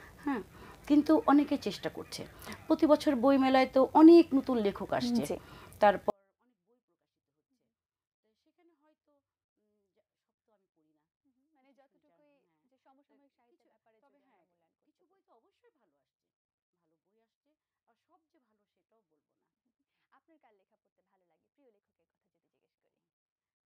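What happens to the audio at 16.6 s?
At 16.6 s the audio is deep inside a 24-bit alignment error (too quiet) that runs from 6.1 s to the end. Samples written as 24-bit values in the low bytes of a 32-bit word are being read as full 32-bit integers, so every value sits about 48 dB below where it should. The sound stays clean but is barely audible. The waveform collapses to a near-flat line, and the spectrogram keeps its shape but fades almost to black.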